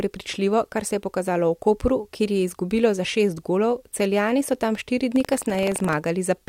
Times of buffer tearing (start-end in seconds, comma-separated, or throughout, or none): 5.12-5.94